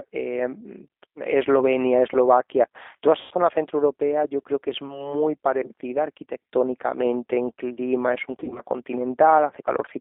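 Across the whole recording the speech carries G.729 codec damage. The audio is squeezed into a band from about 250 Hz to 3.6 kHz and rebuilt from a vocal tract filter, a pitch predictor and a few pulses per frame, which fits an 8 kbit/s G.729A encoder. The voice sounds plainly rough and slightly synthetic. A spectrogram shows an empty region above 3.6 kHz and below 250 Hz, with smeared, blocky harmonics inside that band.

From 3.21 to 3.34 s comes the first VoIP packet loss concealed by the speech codec. About 100 ms of audio, which points to roughly five lost packets, is replaced by the decoder stretching its last pitch and filter into a sound that fades. On the waveform this is a smooth, decaying repetitive stretch. On the spectrogram the harmonics freeze into flat horizontal lines.

From 8.32 to 8.62 s the second concealment is spread over about 240 ms. About 120 ms is lost in short gaps of up to 40 ms, which suggests six lost packets. 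The speech is stretched and fades repeatedly rather than holding one tone. The spectrogram shows several brief frozen, dimmed patches between normal frames.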